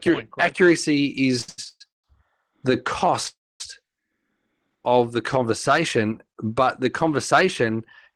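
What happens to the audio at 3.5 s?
From 3.28 to 3.61 s the sound stalls into a brief fading buzz, then silence, and resumes where it stopped. This is a call audio freeze, likely from delayed packets draining the jitter buffer.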